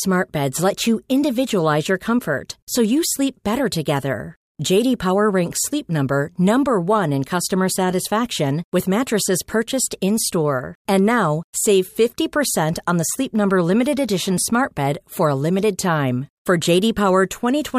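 No technical faults can be heard anywhere in the speech. Nothing in the audio points to a problem in recording, processing or playback.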